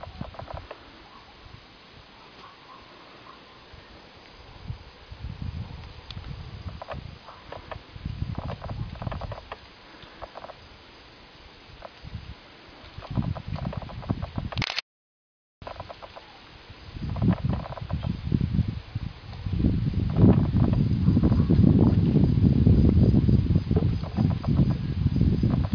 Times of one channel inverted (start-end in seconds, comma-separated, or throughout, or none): none